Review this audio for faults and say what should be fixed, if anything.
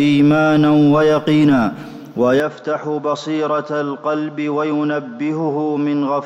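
From 2.4 s onward the sound turns duller and a few dB quieter, likely from the input switched to a poorer device; spectrograms show content abruptly ending above 7.6 kHz, without any gap. Lock the recording input to one device so the system cannot switch microphones or headset profiles mid-session.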